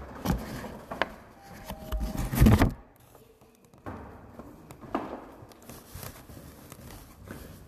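Everyday sounds, with no technical faults audible anywhere in the recording.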